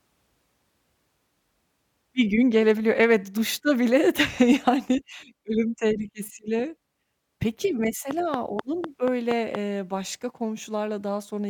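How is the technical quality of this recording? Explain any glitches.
The recording has one clear glitch, a train of clicks late in the speech, between 8.11 and 9.56 s. Sharp, evenly spaced ticks come about 4.2 times a second, around seven in all, each poking out well above the level of the voice and audible in the gaps as well. Their matching shape and steady spacing point to a repeating electrical pulse, most likely interference from nearby equipment or a faulty connection or power supply, rather than anything in the room.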